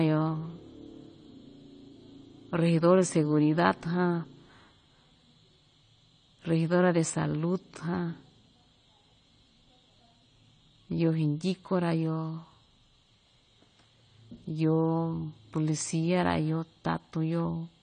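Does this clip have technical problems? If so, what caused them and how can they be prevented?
Yes. For the whole recording the speech is dull and smeared, with nothing above 9 kHz and a plainly audible warbling, fizzy texture on sustained sounds and sibilants. This is likely AAC compression: AAC-LC quantises each frame's spectrum coarsely when starved of bits, which fits a bitrate around 32 kbps. A simple low-pass filter would cut the top cleanly without that swirling grain. Encoding at a higher bitrate, or keeping a lossless master, prevents it.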